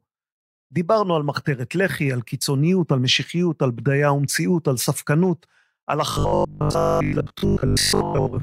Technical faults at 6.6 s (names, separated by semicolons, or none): robotic sound from repeated short buffers